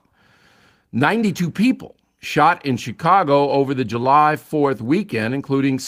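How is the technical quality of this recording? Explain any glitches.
Listening to the speech recording, nothing stood out as a technical glitch.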